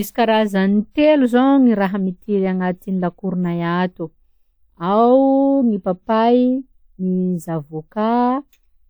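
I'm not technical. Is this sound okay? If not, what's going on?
Yes, it sounds fine: nothing in it stands out as a technical problem, so there's nothing here you need to worry about.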